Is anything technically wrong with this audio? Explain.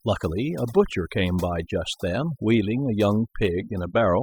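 Yes. Throughout the speech, overdone noise removal is audible. Bands near the noise floor are cut hard, taking quiet speech detail too. Background drops and breaks up into twinkling specks.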